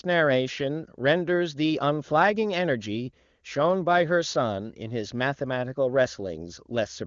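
No technical faults turn up at any point in this speech, which comes through the AMR wideband (HD Voice) codec at 23.85 kbit/s with nothing above about 7.3 kHz.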